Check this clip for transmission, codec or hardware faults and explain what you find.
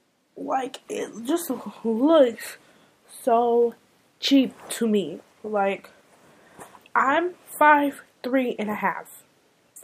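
Nothing heard on listening points to a fault anywhere in the clip.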